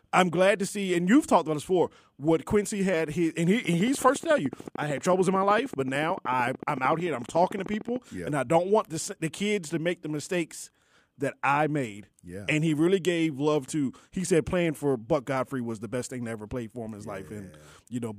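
A train of clicks runs from 3.65 to 7.97 s through the speech: a steady ticking of near-identical pulses at an even 13.5 per second, around fifty in all. They stand a few decibels above the speech itself and carry straight through the pauses, so they sit on top of the sound, not inside it. Such a regular pulse train likely comes from electrical interference from nearby equipment or a faulty connection or power supply.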